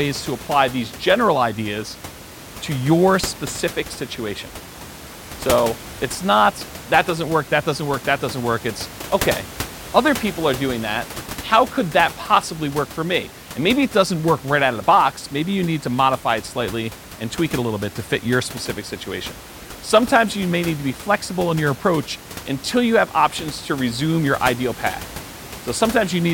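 Speech with no technical faults; the only background is ordinary room noise about 15 dB below the speech, which comes from the recording space rather than the system.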